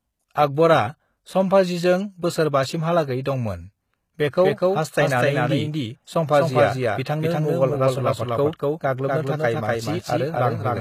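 From the start, the speech has most likely been through HE-AAC compression at a very low rate, plainly audible and consistent with something around 20 kbps. The encoder kept only the lower spectrum and rebuilt the treble by spectral band replication, copying lower bands upward under a coarse envelope. The upper range therefore isn't the real signal: its harmonics don't line up with those below the crossover, and s sounds come out gritty, metallic or lispy.

From 4.42 s to the end, a doubled audio track appears. The same speech has been mixed in a second time, likely either through a slower capture path or an edit that left two copies out of step. The late copy trails by roughly a third of a second at about the same level as the original, full-band and without any decay or room colour. It starts abruptly at 4.42 s and produces a dry, evenly loud echo of every syllable.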